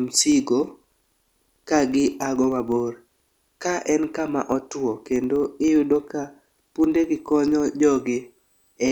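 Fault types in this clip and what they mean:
Filter restarted on every block: a steady ticking buzz at 25 Hz runs under the speech throughout, growing louder as the speech does. The filter loses its memory at each block boundary and restarts from silence, so every block opens with a small click, 25 times a second.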